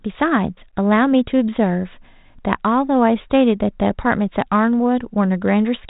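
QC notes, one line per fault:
Nothing stood out on listening to this speech clip.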